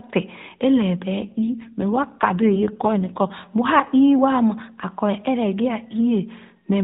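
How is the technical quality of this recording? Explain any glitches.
The speech has passed through an AMR narrowband mobile codec, so nothing above 4 kHz is present. One glitch stands out.

From 1.20 to 3.35 s there is an AMR rate drop. The codec falls back to fewer bits per frame, likely because the radio link weakened. The band stays the same and there is no gap. The voice turns rougher and more synthetic, which fits a step from 12.2 to 5.9 kbps. Then it clears again.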